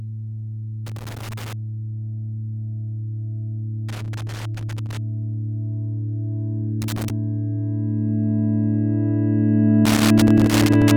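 A worn or dirty contact in the signal path keeps making and breaking, producing loose connector crackle: the audio is chopped into irregular bursts of scratching at 0.86–1.53 s, 3.89–4.97 s, 6.82–7.10 s and 9.85–10.91 s, each burst lasting between about 0.3 and 1.1 s.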